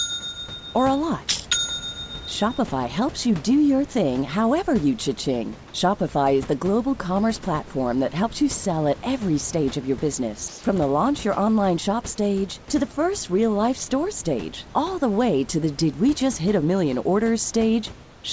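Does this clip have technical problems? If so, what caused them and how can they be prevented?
Yes. Comfort noise in place of the background appears at 10.48–10.64 s and 18.04–18.24 s. The room tone turns into steady, featureless hiss rather than going silent as it would with a gate, likely because discontinuous transmission stopped sending audio and the receiver filled the pauses with synthetic noise. Turning off discontinuous transmission on the sending side prevents this.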